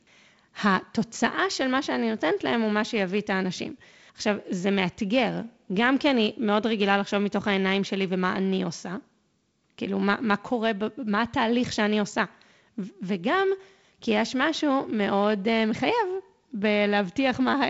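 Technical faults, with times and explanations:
The speech carries the wideband telephone sound of G.722 coding, with nothing above about 7.7 kHz and the light coding texture that fits its 48 kbit/s mode, and no technical faults can be heard.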